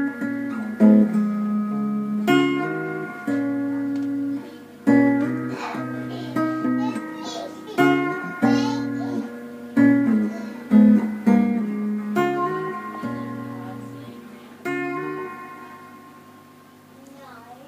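Nothing here gives any trouble: the sounds come through steady and intact the whole way, with no glitches to point to.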